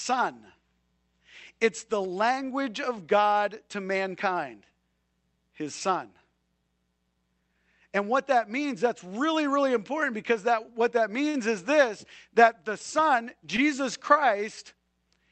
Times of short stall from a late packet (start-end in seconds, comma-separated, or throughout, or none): 11.29-11.37